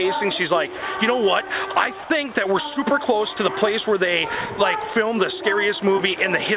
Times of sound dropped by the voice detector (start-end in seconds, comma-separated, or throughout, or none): 0.78-0.82, 2.02-2.10